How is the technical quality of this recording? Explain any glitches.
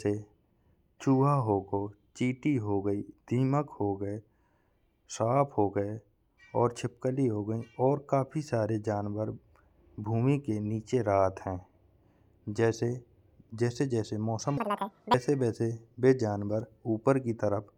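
One glitch stands out in the speech, near the end. From 14.57 to 15.14 s, the audio is read two samples at a time, at double speed. The reader treats each pair of samples as one frame, as if the stream had two channels or samples twice as wide. Half the samples are effectively skipped. The speech runs at 2x speed and jumps up 12 semitones, a full octave. Any strong content above a quarter of the sample rate folds back.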